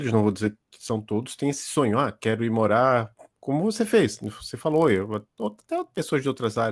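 From 4.1 s to the end, a resampler restarted on every block. The converter treats each 20 ms block in isolation, so every block edge carries a small error, heard as a 50 Hz buzz riding on the speech, consistent with a 48 kHz to 24 kHz conversion.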